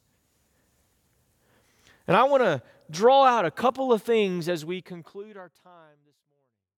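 Speech with no technical faults to report. From around four and a half seconds the level eases down smoothly to the end, with no click or hard edge.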